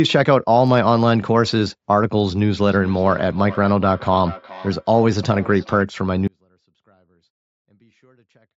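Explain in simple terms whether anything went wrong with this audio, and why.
From 2.66 to 5.88 s the speech comes back as a thinner, ringing repeat about 0.4 seconds later. This is feedback echo between two devices: one device replays what another nearby device's microphone sent, and that microphone picks it up again.

At 6.28 s the speech suddenly cuts out and only a very faint sound remains until the end. This is an audio dropout to a faint residue, likely because the signal was lost while the line stayed open.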